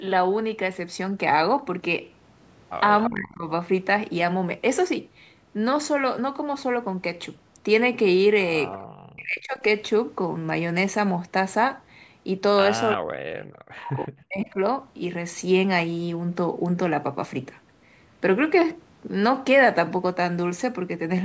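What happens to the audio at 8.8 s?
An echo leak appears at 8.72 to 8.78 s: a brief, faint copy of earlier speech, delayed by about 327 ms and roughly 20 dB below the talker. It is likely loudspeaker sound that the far side's echo canceller failed to remove and sent back.

Speech suppressed in double talk follows from 8.81 to 9.63 s. The voice dips and breaks up for about 0.7 s in total, falling by around 40 dB at its deepest. The likely cause is an echo canceller that confused the talker with echo while both sides spoke and turned both down.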